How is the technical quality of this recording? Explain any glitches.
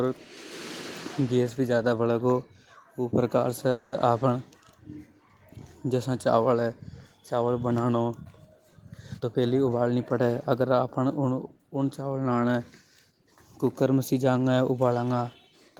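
Two glitches stand out in this speech recording: a brief stall and, later, a stretch that runs fast.

From 3.71 to 3.94 s there is a call audio freeze. The speech stops moving forward and the last sound is drawn out as a fading buzz or hiss for about 210 ms, then resumes exactly where it left off, so nothing is lost but everything after arrives 210 ms later. The likely cause is delayed packets starving the jitter buffer, with the receiver padding the gap. On a spectrogram it looks like a smeared, decaying band with no new structure. The waveform shows a tapering repetitive patch.

From 9.14 to 10.61 s there is a jitter buffer speed-up. The speech plays at about 114% of normal rate while the pitch stays the same, so it sounds hurried. Having built up excess audio, the receiver trimmed many short pitch-period-length slices in succession, about a fifth of a second in total, to shrink the delay. 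A spectrogram shows syllables and harmonic patterns compressed in time without any upward shift in frequency. The waveform shows tighter, closer-spaced segments.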